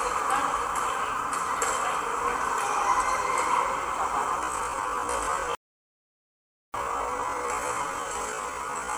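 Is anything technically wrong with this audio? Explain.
Yes. From 4.38 s to the end, the audio plays at half speed with its pitch unchanged, likely from a time-stretch that fills the extra length by repeating short pieces. This time-stretched section drags, and a spectrogram shows features drawn out sideways at the same frequencies.

Between 5.55 and 6.74 s there is an audio dropout to silence lasting about 1.19 s, likely from the input being lost while recording continued writing silence. The sound cuts off completely with no room tone, and the waveform shows a near-flat line.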